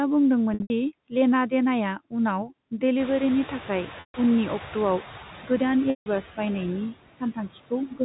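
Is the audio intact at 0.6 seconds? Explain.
No. Between 0.54 and 0.70 s, packet loss with pitch repetition interrupts the speech. About 140 ms of audio went missing, scattered across that 160 ms stretch, and the longest single gap ran about 80 ms. To fill each hole, the receiver kept looping the last pitch period it had received and faded it down. The short gaps come through as a briefly held, buzzy tone. The 80 ms run decays toward silence before the speech returns through a quick cross-fade just ahead of "दि लेना देनाया".

Noise suppressor artifacts are also present at this moment. The suppressor pulls down any band it judges to be steady noise by about 6 dB, frame by frame. Around 0.6 s this makes the residual noise dip and swell against the speech.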